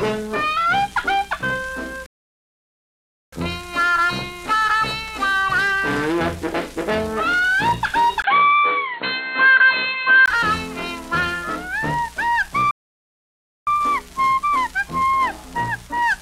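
A playback stall at 2.06 s cuts the sound off for 1.26 s until 3.33 s, likely because the player ran short of data, before it resumes. An input switched to a poorer device from 8.22 s to 10.28 s brings a 20 ms gap, then a dull band-limited sound, a level shift of about 5 dB and new background noise about 35 dB down, likely from the recording moving to a narrower microphone. A second playback stall at 12.71 s silences the output for 0.96 s, to 13.67 s.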